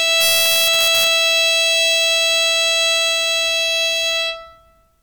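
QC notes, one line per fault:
0.21–1.07 s, integer overflow: loud peaks in the music exceed the integer ceiling by about 1 dB and wrap to the opposite extreme instead of being limited, so each overshoot becomes a full-scale sign flip, heard as harsh cracks far sharper than ordinary clipping.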